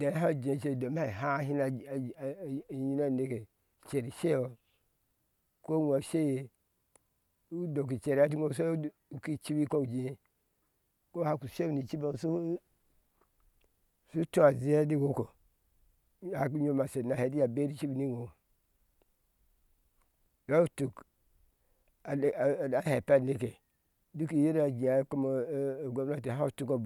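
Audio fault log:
No faults are audible anywhere in this speech recording.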